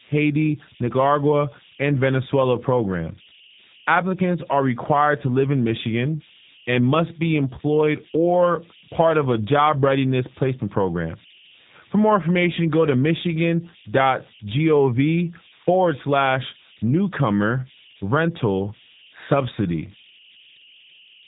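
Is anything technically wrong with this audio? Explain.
Yes, two problems run the whole way through this speech clip.

First, converter idle tones: an undithered delta-sigma converter settles into repeating bit patterns on quiet input, leaving a tone around 3 kHz, about 25 dB below the signal.

Second, G.729 codec damage: the speech sounds plainly rough and synthetic, rebuilt from a vocal tract filter plus a few pulses per frame, which fits an 8 kbit/s stream, with nothing above 3.8 kHz.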